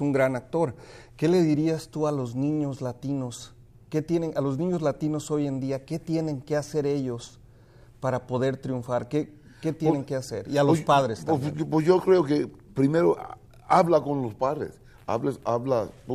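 No dropouts, clipping, glitches or other technical faults can be heard anywhere in the recording.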